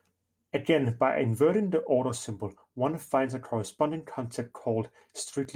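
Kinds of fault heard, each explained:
No kinds of fault are heard in this speech clip.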